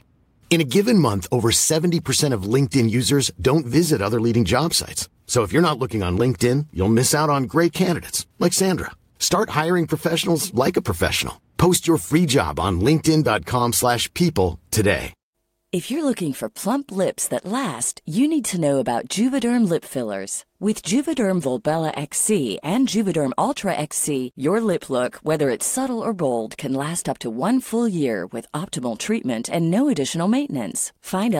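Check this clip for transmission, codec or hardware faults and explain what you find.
A single transmission fault stands out: a call bitrate drop from 20.36 s to 26.37 s, ending just before "can last up to". The speech turns coarse and muffled for about 6 s. The sound fits the encoder being forced down from roughly 64 to 24 kbps, quantising everything more crudely and discarding the upper band. On a spectrogram the high frequencies vanish abruptly and the remaining harmonics look smeared and grainy until full bandwidth returns.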